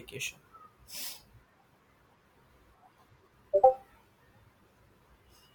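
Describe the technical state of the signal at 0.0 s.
At 0.0 s the speech signal is intact, with no audible technical fault at that point.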